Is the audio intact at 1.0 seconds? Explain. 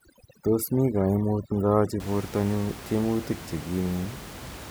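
No. At 1.0 s the speech sits inside a stretch of overdone noise removal running from 0.0 to 2.0 s. The suppressor cuts individual frequency bands that hover near its noise estimate, taking the room noise (about 15 dB below the speech) and quieter speech detail with it. The result is a lowered background that breaks up into twinkling specks.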